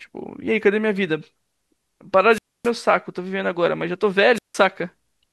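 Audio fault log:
2.30–2.71 s and 4.34–4.56 s, wireless microphone squelch dropout: the radio link weakens, hiss swells, then the receiver mutes for about 0.27 s and 0.16 s before the speech returns. That rising static ahead of each hole sets it apart from a clean digital packet dropout.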